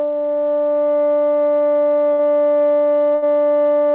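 Music, cut off at 4 kHz as a narrowband call codec like G.711 leaves it, with two bursts of packet loss at 2.12 s and 3.15 s. Each is concealed by about 70 ms of fading continuation, then the music resumes 60 ms and 80 ms further on.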